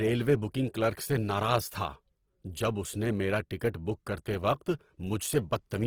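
Speech with plainly audible Opus compression throughout: voiced sounds turn grainy, rough and noisy rather than swirly, likely from Opus music-mode coding at a low rate near 16 kbps. A spectrogram shows filled, speckled upper bands with few holes and nothing above 20.2 kHz.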